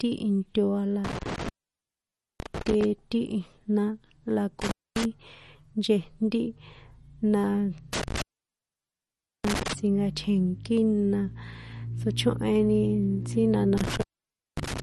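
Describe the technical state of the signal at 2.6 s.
At 2.6 s the sound is breaking up, with crackle at the edges of each gap and hiss where the signal should be. This is an intermittent contact, running from 1.04 s to 2.84 s. A loose cable or plug keeps opening and closing the line, and the open stretches add up to about 914 ms within that span. While the connection is broken the speech vanishes, and the crackle marks the moments it reconnects.

Over this moment, and through the rest of the clip, there is also plainly audible codec damage. The speech has a watery, swirling quality, and nothing is present above 12.1 kHz. This is likely MP3 compression at a low bitrate, which fits roughly 40 kbps. Short of bits, the encoder drops weaker frequency components, which flicker on and off from frame to frame, and it cuts the treble at a fixed point.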